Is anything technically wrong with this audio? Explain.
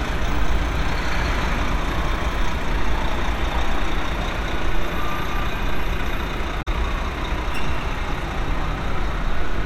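Yes. Damaged data in a compressed stream, from 6.59 to 6.68 s: corrupted bytes in the encoded file make the decoder misread those frames, lose sync and hunt for the next valid header, leaving a brief glitch in the sound.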